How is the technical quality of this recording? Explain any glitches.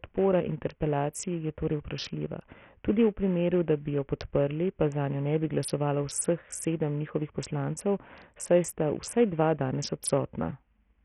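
The technical quality is poor. Throughout the speech, treble flickers and drops out under gritty grain, likely Bluetooth SBC compression starved of bits, fitting roughly 48 kbps. Its coarse fixed bands give grit rather than MP3-style swirl.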